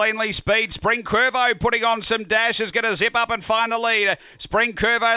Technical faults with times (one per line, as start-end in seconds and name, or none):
none